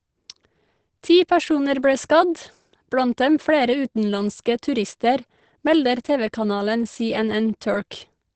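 Across the whole clip the speech sounds muffled and hoarse, which points to likely Opus compression running in its SILK speech mode at a low rate, in keeping with about 16 kbps. The codec has restricted itself to wideband, so nothing survives above 8.6 kHz. On a spectrogram this appears as a flat, hard ceiling near 8.6 kHz with empty space above.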